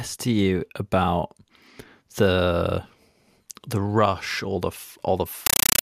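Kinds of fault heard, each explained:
Compressed stream played as audio: From 5.46 s to the end at 5.81 s, the speech gives way to loud, harsh, chattering static. A Dolby Digital (AC-3) bitstream is reaching the output as plain samples, with no decoding. Each coded frame becomes an 8 ms blast of noise followed by silent padding. The bursts repeat 31.25 times a second, which gives the rapid chatter. The noise density fits a 384 kbps stream.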